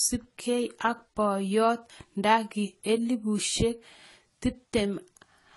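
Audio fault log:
Throughout: transcoding between lossy codecs. The speech carries two layers of coding damage at once, with the artefacts of both codecs heard together. This is likely a Vorbis encode at around 48 kbit/s re-encoded to AAC-LC at around 32 kbit/s. A spectrogram shows a hard ceiling near 11.5 kHz and blotchy, patchy energy below it.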